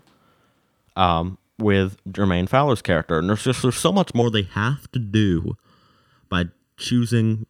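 From 4.22 s, right after "just there's so much", the speech turns hollow and phasey through to the end at 7.50 s. This is channel delay (comb filtering): one channel arrives under a millisecond late, and when the two are summed to mono the shared content cancels at evenly spaced frequencies, the first near 700 Hz and then about every 1.4 kHz above it. On a spectrogram these show as fixed dark horizontal stripes starting at 4.22 s.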